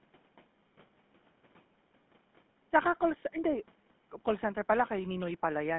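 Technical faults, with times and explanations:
Throughout, GSM full-rate codec: the speech has that unmistakable buzzy, gravelly grit, and it's plainly audible. The codec rebuilds the voice from a vocal-tract model fed by a sparse train of regularly spaced pulses, keeping only a third of the excitation, so the fine texture turns rough. The roughness fits the old 13 kbps full-rate coder, and the sound is squeezed into a narrow 150 Hz to 3.5 kHz telephone band.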